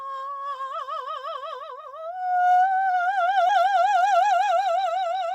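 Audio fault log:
3.47–3.51 s, short concealed packet loss: about 20 ms of the music arrived too late. The receiver extended the preceding sound to cover the gap, leaving a brief smear.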